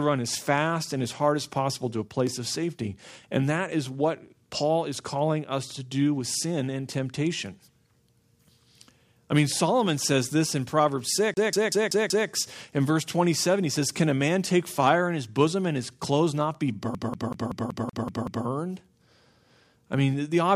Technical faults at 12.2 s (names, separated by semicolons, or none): CD stuck on one turn